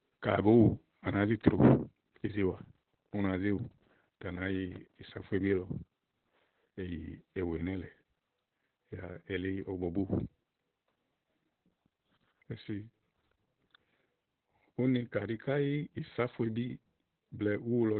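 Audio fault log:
throughout: Opus voice compression. The speech sounds muffled, hoarse and slightly robotic, and there is nothing above about 4.2 kHz. At a very low rate the codec falls back to its narrowband SILK mode, which models the voice with linear prediction and codes the excitation signal coarsely. The missing upper band dulls consonants, and the rough excitation adds buzz and graininess. The heavy damage points to a bitrate around 8 kbps.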